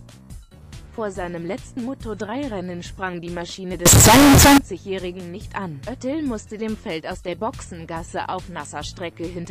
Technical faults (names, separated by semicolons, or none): float read as integer